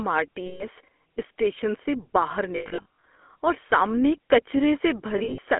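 The whole speech clip carries the buzzy, gravelly roughness of the GSM full-rate codec. It rebuilds the voice from a vocal-tract model and sparse pulses. The damage is plainly audible. The band is held to a phone line, about 250 Hz to 3.4 kHz.

Lost GSM frames appear three times. From 0.46 to 0.64 s, after "آر ٹی" and before "اسٹیشن سے باہر", the last good sound is held as a rough, metallic ring for 140 ms. From 2.56 to 3.04 s, before "اور سامنے", the losses come in scattered runs totalling 320 ms. The longest run is about a tenth of a second. From 5.18 to 5.39 s, scattered losses add up to 140 ms, with runs under a tenth of a second. Each gap repeats the previous frame.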